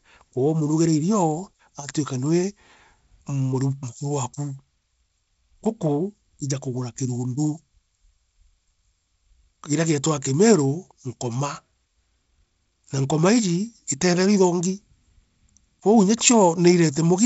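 No technical faults can be heard in the speech. It has passed through G.722 wideband telephone coding at 48 kbit/s, so nothing lies above 7.7 kHz and a light coding hiss sits under the sound, a little noisier in the lower band at this reduced rate.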